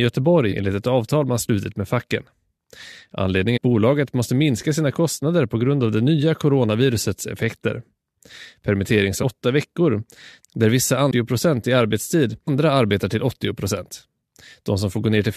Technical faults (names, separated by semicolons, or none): damaged data in a compressed stream